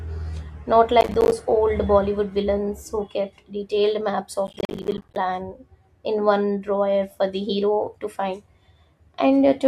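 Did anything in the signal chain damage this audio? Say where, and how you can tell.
Yes. Processor overload crackle hits the speech from 1.01 to 1.32 s and again from 4.47 to 5.16 s, just after "who kept detailed maps". The fault sits at the driver or buffer stage. Buffers of about 10 ms repeatedly miss their deadline and drop to silence. The waveform shows rapid hard-edged gaps, and the spectrogram shows vertical broadband streaks across the burst.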